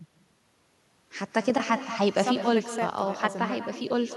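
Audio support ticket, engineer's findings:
Echo with no canceller, throughout: thinner copy about 13 dB down, roughly a fifth of a second late. Far-end loudspeaker leaking into its mic. Discrete repeat, not diffuse room reverb.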